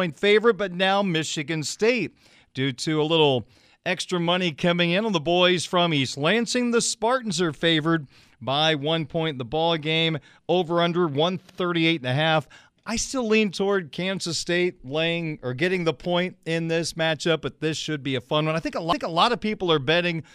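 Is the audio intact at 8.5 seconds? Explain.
Yes, the speech at 8.5 seconds is intact, with no dropout, click, distortion or other fault at that moment.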